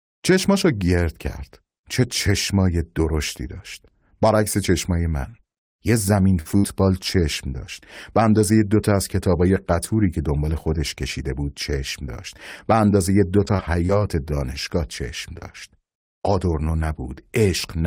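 Speech with repeated packet loss (robotic sound) from 5.31 to 6.65 s and again from 13.45 to 13.91 s. The decoder covers a run of short gaps by extending the preceding audio, giving a choppy texture with fragments missing. About 180 ms is patched in the first stretch, with the longest hole 66 ms. The second is lighter, with about 53 ms filled. Separately, a short concealed packet loss at 15.39 s fills roughly 26 ms, heard as a brief smear where the decoder bridges a lost 20 ms packet.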